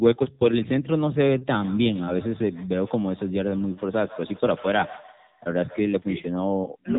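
From start to end, the speech runs through the AMR narrowband mobile codec. Nothing above about 3.8 kHz survives, so the sound is thin and muffled, like a phone call. The codec rebuilds each 20 ms frame from a vocal-tract model driven by a few pulses. At this low rate the rebuild is coarse. The damage is plainly audible as a buzzy, synthetic edge on the voice. That fits AMR-NB's 7.95 kbit/s mode.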